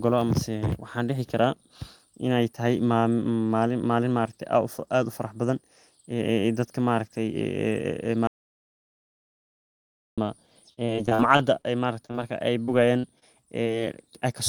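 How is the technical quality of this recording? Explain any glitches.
The recording has three kinds of network and input faults, all in its second half.

From 8.27 s to 10.18 s the speech cuts to dead silence, with no room tone, for about 1.9 seconds. This is an audio dropout to silence, likely an input that was briefly lost while the recorder kept writing silence, so whatever was said there is gone.

Between 10.73 s and 12.16 s the speech turns choppy and robotic, with pieces missing. This is repeated packet loss: eleven gaps, the longest 39 ms, were patched by stretching the preceding sound, and about 18% of that stretch is filler.

Brief smears follow at 12.66 s, 13.00 s, 13.19 s and 13.64 s. Each is short concealed packet loss, where 20 to 40 ms never arrived and the decoder extended the last sound before blending back.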